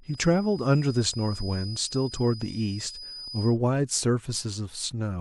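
From the start of the speech to 3.59 s, a feedback whistle sits at 5 kHz, roughly 15 dB below the speech, thin and steady in pitch, swelling and fading slowly in level. The likely cause is a loudspeaker-to-microphone loop held just short of runaway feedback.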